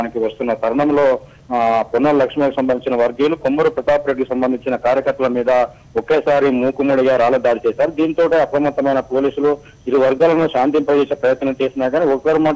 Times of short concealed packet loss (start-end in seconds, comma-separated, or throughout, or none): 10.18-10.21